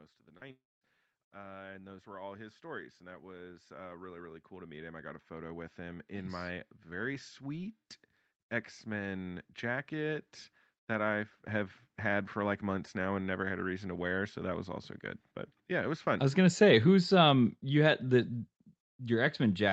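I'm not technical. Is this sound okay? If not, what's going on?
No. The speech has three problems, all near the start.

Automatic gain rising, from 0.25 s to about 7.8 s: the call's automatic volume control judged the incoming sound too quiet and kept turning it up slowly. Over those first seven or so seconds the speech and the background noise behind it get louder together, a gradual swell rather than a sudden jump, until the level settles.

Short concealed packet loss, from 0.37 to 0.43 s: a tiny piece of the call, about 40 milliseconds, arrived too late to be played. The receiving end covered the hole by stretching the sound it had just played, then blended back into the real audio. You hear this as a brief smear or wobble, and anything very short in that instant can simply vanish.

Long network dropout, from 0.51 to 0.83 s: for roughly a third of a second the sound turns into a fading continuation of what came just before, then goes quiet. 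When the speech returns, the part that belonged in that gap is missing rather than delayed. The likely cause is the connection briefly delivering no audio at all, with the receiver filling in what it could before giving up.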